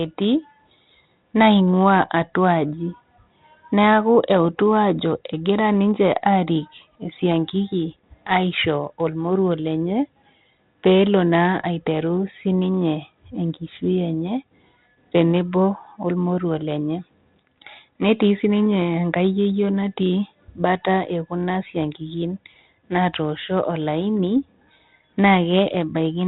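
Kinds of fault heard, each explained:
Nothing stood out as a fault on listening.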